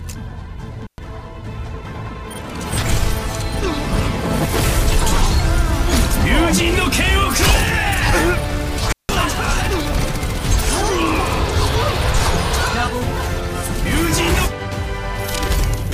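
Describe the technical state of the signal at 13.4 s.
At 13.4 s the signal is intact, with nothing audible that would mark a fault at that point.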